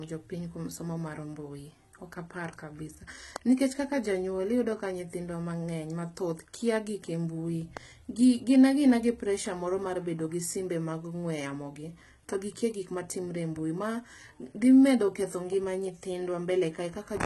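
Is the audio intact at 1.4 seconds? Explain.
No. At 1.4 s, as through the whole clip, the speech carries the marks of low-bitrate audio saved at a high bitrate. Nothing reaches above about 11.8 kHz, so the top end sounds dull and capped, and the artefacts of the starved first codec are still there. This is likely a very low-bitrate first encode later re-saved as a generous MP3, which adds bulk without restoring any of the lost detail.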